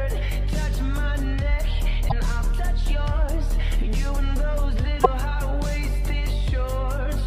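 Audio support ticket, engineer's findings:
Two short glitches, 2.08–2.12 s and 5.03–5.06 s. Audio skips forward; each break lasts under two 26.1 ms frames. Likely cause: broken MP3 bit reservoir. Frames dropped upstream. Following frame reads reservoir bytes belonging to a different frame, decodes garbage briefly. Component: MP3 stream path or frame handling before decoder. Check for packet or frame loss at both times.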